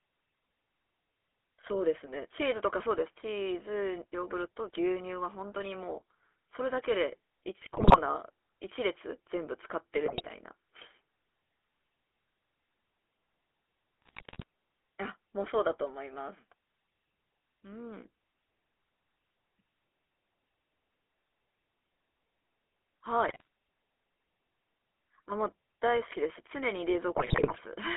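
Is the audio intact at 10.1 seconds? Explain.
No. GSM bit errors corrupt 10.06 to 10.27 s: flipped bits garble the decoder's filter, pitch and gain values, producing squawks, pops and gargling across what sounds like about ten damaged frames. Underneath, the GSM full-rate codec's pulse-driven vocal-tract model gives a buzzy, gravelly roughness, with the band held to 300 Hz to 3.4 kHz.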